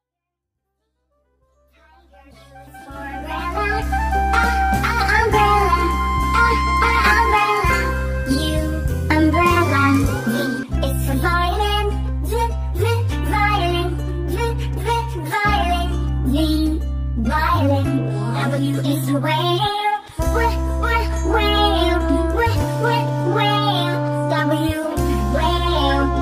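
No technical faults can be heard: the level rises in a smooth, editor-style fade from the very beginning to about 3.93 s with no click or hard edge.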